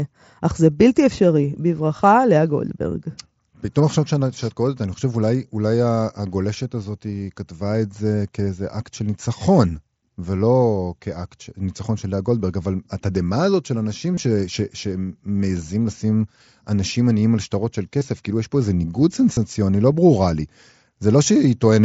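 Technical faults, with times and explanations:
1.97–2.00 s, 14.15–14.17 s, 18.00 s and 19.34–19.37 s: concealed Bluetooth headset packet loss. Short dropouts of 15 to 30 ms are patched over by repeating recent waveform, giving brief buzzy blips and a slight warble on recovery.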